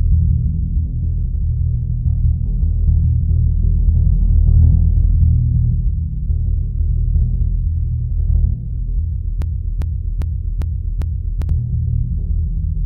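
At 9.42 s the music locks into a broken-record loop that runs until 11.49 s. A fragment of about 0.4 s plays back to back, five times in a row, with each repeat identical to the last. The likely cause is a player, encoder or stream stalling and continuing to output the last buffered chunk it held. Whatever music should have filled those two seconds is missing, and playback resumes further on at 11.49 s.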